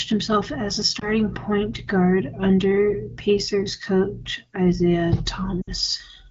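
A speech recording with lost AMR speech frames. At 0.99 to 1.09 s there is a brief dip or warble, which fits one lost 20 ms frame. At 5.61 to 5.70 s the sound drops to near silence, which fits about three lost frames. Radio errors corrupted frames, so the AMR-WB decoder, at a light wideband quality that fits 12.65 kbit/s, repeated its last good settings with falling gain.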